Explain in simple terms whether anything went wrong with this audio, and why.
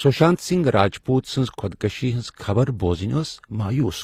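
The speech has the mixed blemishes of two codecs heard together from start to finish, with the crisp top end missing: nothing is heard above about 15.7 kHz. This is likely transcoding between lossy codecs, where the audio was squeezed first by HE-AAC and then again by Opus. The second codec wasted effort on the first one's blemishes while adding its own, and the lowest top-end cut-off in the chain remained.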